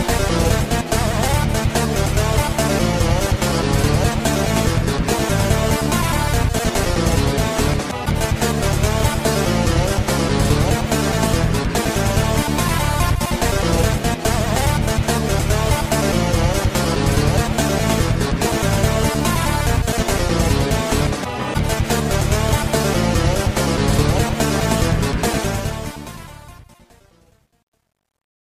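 The audio ends with truncation distortion on a fade from 25.35 s to the end at 28.47 s. The fade is quantised without dither, which fits an 11-bit stage, so the decaying waveform collapses into coarse steps and turns gritty, worst from 26.64 s onward.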